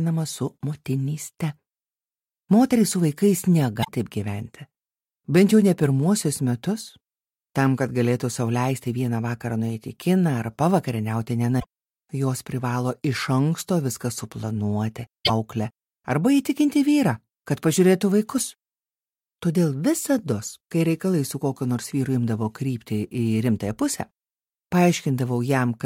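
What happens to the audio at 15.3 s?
Damaged data in a compressed stream runs from 15.22 to 15.30 s. The decoder misreads corrupted frames, loses sync and briefly emits a short chirp or squawk.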